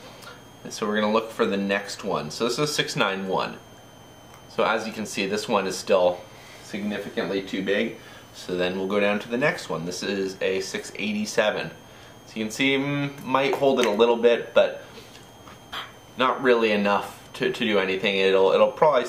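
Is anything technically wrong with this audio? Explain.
Yes. Throughout the clip, a faint high whistle drifts between about 3.02 and 3.27 kHz, roughly 35 dB down. This is switching supply whistle, from a power supply cycling in an audible burst mode or beating with another one.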